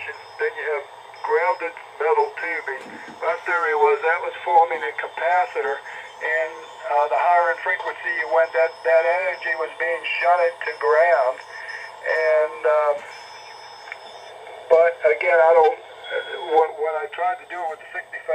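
No technical faults can be heard in the audio.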